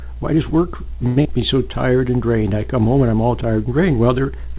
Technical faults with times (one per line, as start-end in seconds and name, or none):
1.07-1.19 short stall from a late packet
1.22-1.28 short concealed packet loss